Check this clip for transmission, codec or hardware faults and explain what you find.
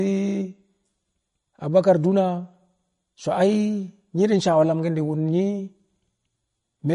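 One codec fault runs through the whole speech recording: audible MP3 compression from start to finish. Nothing is present above 10.5 kHz, and the remaining sound has a watery, swirling quality with smeared onsets and chirpy sibilants. The likely cause is an encoder starving for bits, which fits roughly 40 kbps. It cut the treble at a fixed point and let weak frequency lines blink on and off between frames. A plain low-pass filter would dull the top end without adding that shifting, metallic texture.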